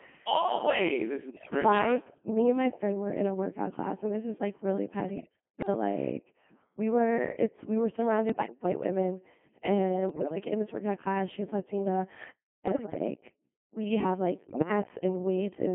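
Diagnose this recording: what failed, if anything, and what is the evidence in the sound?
The codec stage failed across the whole clip. This speech comes through a Codec 2 vocoder. It sounds robotic and buzzy, confined to about 150 Hz to 3.4 kHz. The waveform is not kept. The decoder rebuilds speech from pitch, voicing and envelope using sine waves. The heavy damage fits a 2.4 kbit/s mode.

The radio link failed in bursts. Bit errors on digital voice radio strike at 1.30 to 1.52 s, 5.18 to 5.67 s, 8.30 to 8.60 s, 10.10 to 10.36 s, 12.68 to 13.08 s and 14.50 to 14.70 s. Pitch, level and tone lurch into warbles and bleeps. A bit error rate of about 5 to 10 percent corrupts each frame's parameters.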